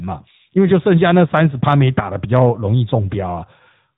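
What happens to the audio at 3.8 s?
At 3.8 s the speech is still passing through the AMR narrowband mobile codec that covers the whole clip. Nothing above 4 kHz survives, and the vocal-tract model's pulse excitation gives a plainly audible buzzy, synthetic edge, which fits a 10.2 kbps mode.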